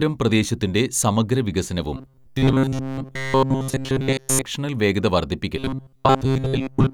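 A speech clip with robotic sound from repeated short buffers in two stretches: 1.97 to 4.42 s, right after "പ്രദേശത്തിന്റെ സമഗ്ര വികസനവും", and again from 5.57 s to 6.93 s. The voice turns into a rigid metallic buzz at 133 Hz, constant through the first stretch and over most of the second. That's likely audio arriving too seldom, with the software looping roughly 7.5 ms chunks to fill the gaps and skipping the real audio.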